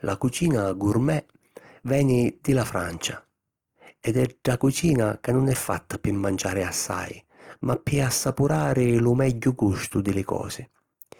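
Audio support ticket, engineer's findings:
Opus compression, throughout. Speech grainy and rough, tonal parts turned noisy, little swirling and few spectral holes. Likely cause: Opus in CELT music mode starved of bits, band energies kept but fine detail refilled with folded copies of lower bands and noise. Bandwidth still full, so no muffling. Damage plainly audible, consistent with a rate near 24 kbps.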